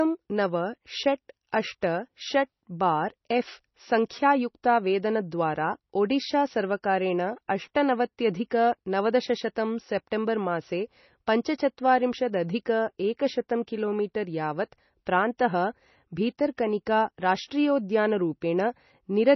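Right from the start the whole clip has a hard ceiling: nothing above 5.9 kHz, with a watery, swirly texture on the speech, likely MP3 compression run very lean, something like 24 kbps. Starved of bits, the encoder chops the treble and lets weaker frequency lines flicker in and out.

At 1.81 s there's a brief pre-echo, a hiss smeared about 13 ms ahead of a sharp onset. The codec spreads its quantisation noise across the whole block, so noise meant for the loud attack leaks into the quiet moment before it, blunting the attack.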